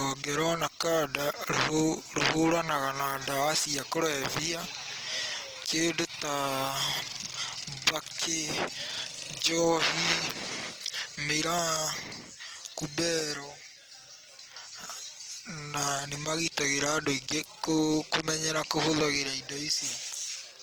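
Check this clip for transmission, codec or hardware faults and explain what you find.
One fault runs through the entire clip: Opus compression, most likely from encoding at a low bitrate. The graininess suggests the encoder's music (CELT) mode at around 16 kbps. That mode keeps each band's overall energy but has too few bits for fine detail, so it fills starved bands by folding in lower content or adding noise. The bandwidth stays full, reaching about 20.4 kHz, yet the speech sounds plainly rough and grainy, its tonal parts turning noisy rather than swirly.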